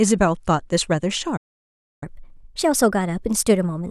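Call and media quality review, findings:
Call and media quality review, findings:

Playback stall, 1.36–2.03 s: speech stops mid-flow for about 0.65 s, then resumes. The waveform flatlines. The spectrogram shows a clean, empty vertical gap across all frequencies. Likely cause: player buffer underrun or a blocked audio output thread.

Catch-up at higher speed, 2.03 s to end of clip: playback runs 1.15x fast with pitch raised roughly two semitones. The player is resampling its backlog to recover the lost time. On the spectrogram, harmonics and formants shift upward and syllables compress. Waveform segments are visibly shortened. Component: playout/jitter-buffer recovery logic.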